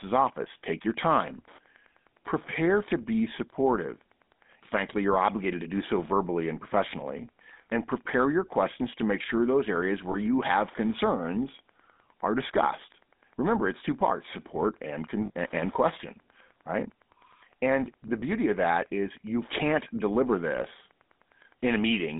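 Speech runs through the GSM full-rate codec for the whole clip. The band is held to roughly 200 Hz to 3.7 kHz, and the voice carries plainly audible buzzy, gravelly grain, consistent with the 13 kbps GSM full-rate scheme rebuilding speech from a vocal-tract model fed by a thinned, regularly pulsed excitation. That grain sets it apart from a simple narrowband telephone line, which would sound muffled but stay smooth. Lost GSM frames also interrupt it three times: at 10.12 to 10.16 s, 15.26 to 15.30 s, and 18.20 to 18.23 s. Each gap is a brief rough, metallic ring where the decoder repeats the last good frame's settings. The spans of about 40 ms, 42 ms and 30 ms cover one, two and one missing 20 ms frames, 20, 40 and 20 ms of lost audio. Unlike a dropout or click, the sound is smeared and held rather than cut to silence.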